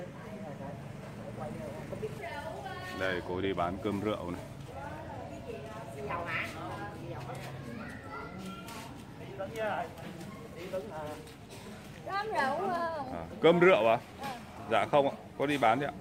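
No technical faults can be heard anywhere in this recording.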